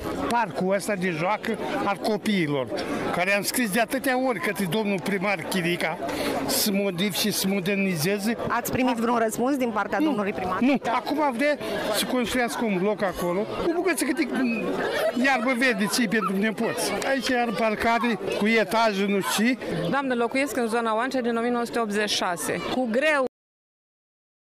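At 23.27 s the audio has a cut-off end: the final buffers were never written, so the sound stops abruptly into digital silence without any decay.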